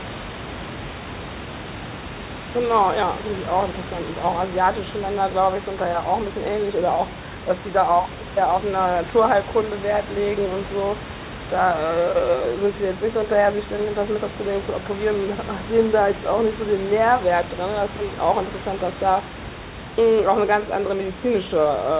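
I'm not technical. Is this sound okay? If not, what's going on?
Yes, nothing has gone wrong in this speech recording. It came through a phone-style call line, so nothing above about 4 kHz is there and it sounds a little narrow, and some quiet background noise from the room sits underneath.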